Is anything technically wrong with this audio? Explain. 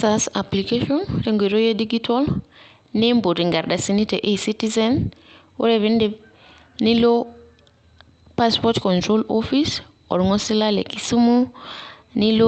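No, nothing is technically wrong with this speech recording; it has the ordinary character of a call link, with the light coding texture of a speech codec and content that stops around 8 kHz, which fits a normally working Opus call path.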